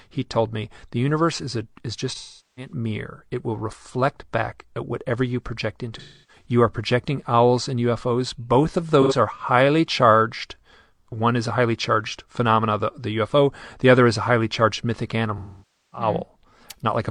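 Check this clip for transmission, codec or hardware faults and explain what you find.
AAC frame loss with concealment occurs four times in the speech: at 2.14 to 2.73 s after "universe is a is", 5.98 to 6.46 s after "at whatever you project", 9.01 to 9.13 s, and 15.38 to 16.07 s after "highly charged mythic". The decoder lost frames and rebuilt the gaps from the last good spectrum. The short 9.01 s gap sounds like a brief smeared, noisy patch. The longer gaps, up to about half a second, decay away and then fade back in.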